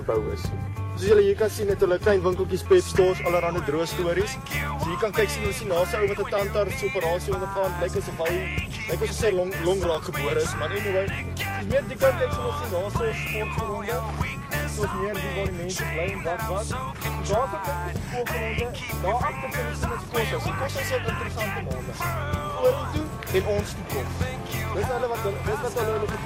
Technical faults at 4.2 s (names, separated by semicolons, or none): clock drift buffer slips